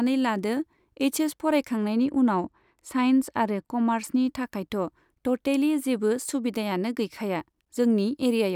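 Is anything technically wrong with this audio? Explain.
Yes. From 1.88 to 4.28 s, de-emphasis was applied wrongly: a treble-cut stage meant to undo pre-emphasis acted on speech that had no boost, or was applied twice, sloping the top end down by about 8 dB at 10 kHz relative to 1 kHz. That stretch sounds dull and muffled.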